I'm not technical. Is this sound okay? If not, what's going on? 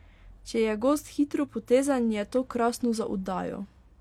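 Yes, nothing is wrong here.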